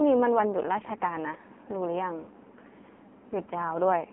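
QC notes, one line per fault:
throughout: AMR narrowband mobile codec. Heavy damage gives a buzzy, synthetic tone, which fits a low mode around 5.9 kbps. The spectrogram shows energy confined to 200 Hz to 3.4 kHz, with a hard ceiling and smeared, pulse-driven harmonics.
1.36–1.41 s and 2.96–2.99 s: lost AMR speech frames. Each is a single 20 ms frame that the decoder filled by reusing the previous settings at falling gain. Each sounds like a brief dip or warble. The waveform shows a short amplitude sag, and the spectrogram shows a frozen, fading harmonic patch.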